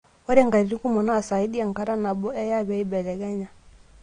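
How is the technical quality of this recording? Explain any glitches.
The recording is clearly degraded by lossy compression that runs through the whole clip. AAC compression, present from start to finish: the band-limited, smeared character is likely the work of an AAC-LC encoder running short of bits, consistent with a rate around 32 kbps. To save data, the encoder discards content above 9.6 kHz and quantises the remaining spectrum coarsely, so the speech sounds dull and lacks air, with a watery, fizzy texture on sibilants and held sounds.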